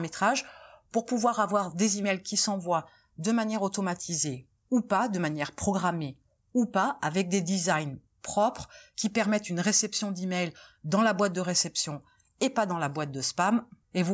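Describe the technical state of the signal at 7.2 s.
At 7.2 s the speech signal is intact, with no audible dropout, distortion, glitch or other technical fault at that point.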